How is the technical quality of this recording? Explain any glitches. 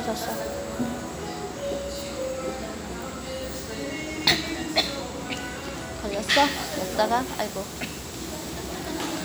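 No technical glitches are audible.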